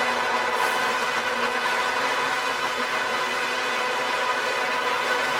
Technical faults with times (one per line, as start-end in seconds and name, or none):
0.00-5.39 computer activity noise